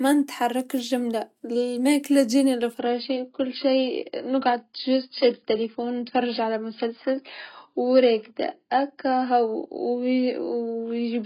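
Speech clip that drops to a lower-bitrate adaptive stream at 2.79 s through to the end: the treble vanishes above 5.1 kHz with no gap, which fits a sudden switch to a very low AAC rate.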